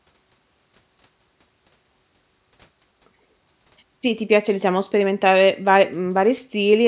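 No technical faults are audible.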